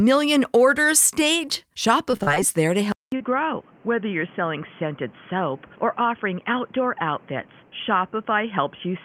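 At 1.45 to 1.49 s there is a short concealed packet loss. About 20 ms of audio arrived too late to decode. The receiver bridged the hole by extending the preceding sound. It is heard as a brief smear in the speech.

From 2.11 to 2.38 s, repeated packet loss gives a robotic sound. Four separate gaps remove about 100 ms in total. The longest is 34 ms. Concealment fills about a third of this span, so the speech turns choppy.

At 2.92 s the audio drops out for 200 ms. It returns duller and boxier, with nothing above 3.4 kHz. It is about 5 dB quieter, with a new noise floor roughly 30 dB down. This is likely the input switched to a poorer device, such as a headset's call profile.

Another short concealed packet loss falls at 3.16 to 3.22 s. About 40 ms went missing and was patched from the prior sound. It is a longer smear than the first, heard through the narrowed band.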